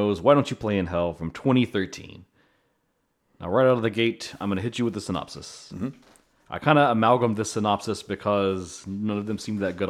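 From about 0.12 s right through to the end, there's a steady run of clock slip clicks, roughly every 20 ms, so around fifty a second, which blurs into a soft, gritty rattle riding on the speech rather than separate ticks. It's most obvious on the louder, sustained stretches and drops away in the pauses. The likely cause is two devices free-running on unsynced clocks, drifting apart by something like a tenth of a percent, with each tick sounding like a single sample being dropped or repeated as the gap catches up.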